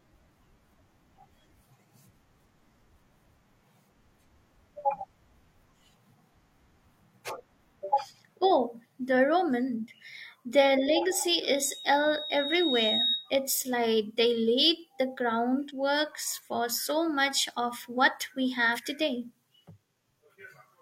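Speech with three brief blips, at 7.39 to 7.43 s, at 15.65 to 15.71 s between "like they laid the" and "for so much of", and at 18.72 to 18.78 s just after "much of what we". These are damaged data in a compressed stream: corrupted frames throw the decoder out of sync until it finds the next frame header. From 11.44 to 13.32 s a steady 3.8 kHz tone swells over about one and a half seconds to roughly the level of the speech. This is loudspeaker feedback squeal, where the microphone re-amplifies its own loudspeaker output at that frequency until the loop runs away.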